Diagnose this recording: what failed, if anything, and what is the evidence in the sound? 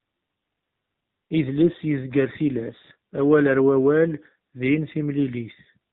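The failure is at the codec stage: the AMR narrowband mobile codec runs through the whole speech clip. Nothing passes above 4 kHz, and the voice has a buzzy, synthetic edge, which fits a low AMR-NB mode around 7.4 kbps that rebuilds speech from a vocal-tract model and sparse pulses.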